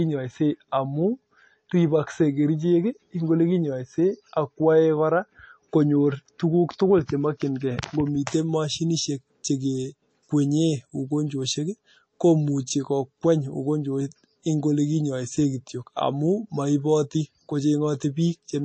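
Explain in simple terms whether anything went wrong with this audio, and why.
Throughout the speech the sound is dull, with nothing above 8.4 kHz, and it has a watery, swirly edge on s sounds. That points to MP3 compression, likely squeezed hard. A plain treble filter would sound muffled without the swirling.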